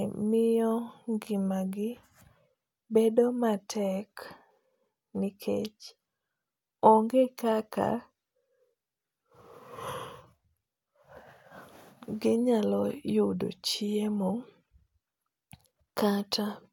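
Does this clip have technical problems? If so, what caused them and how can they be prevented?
No technical faults are audible.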